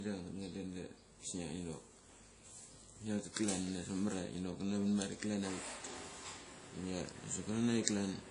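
A low-bitrate transform codec, likely WMA compression at a rate that fits around 32 kbps, has been applied to the speech for its full length. Its long blocks smear quantisation noise over tens of milliseconds, and weak spectral lines are dropped to zero, with nothing left above about 10.1 kHz. The result is plainly audible: the speech rings and sounds washy, and a hiss rises and falls with it.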